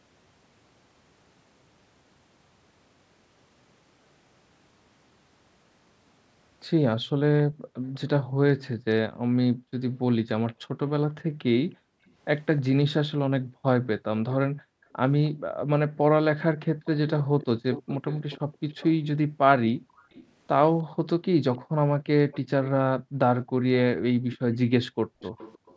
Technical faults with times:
7.47-16.85 background gated by the echo canceller
7.94-7.99 echo leak
12.08-12.62 echo leak
16.85-25.77 echo leak
18.41-23.18 background gated by the echo canceller
24.96-25.20 background gated by the echo canceller

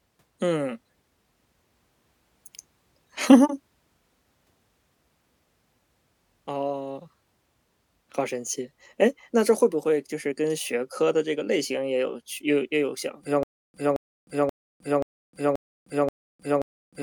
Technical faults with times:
13.43-17.03 stutter with silent gaps

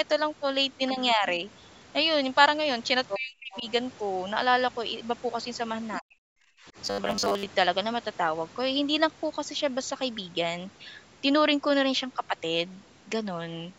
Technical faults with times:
0.90-1.25 speech suppressed in double talk
3.08-3.18 other side's voice leaking through
3.17-3.65 speech suppressed in double talk
3.52-3.61 other side's voice leaking through
5.94-6.00 other side's voice leaking through
6.00-6.72 speech suppressed in double talk
6.85-7.46 robotic sound from repeated short buffers

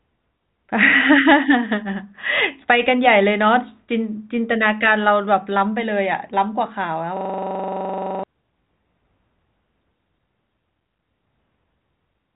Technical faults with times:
7.17-8.23 system hang loop

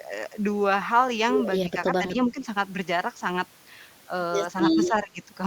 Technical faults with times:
2.14-2.38 speech suppressed in double talk
4.88-5.21 speech suppressed in double talk

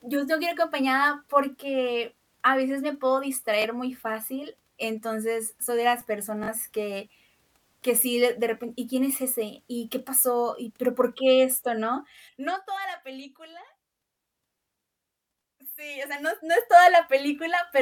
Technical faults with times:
3.62-3.64 Bluetooth stutter
6.43-6.48 Bluetooth stutter
11.98-12.71 zipper noise
15.93-16.73 zipper noise

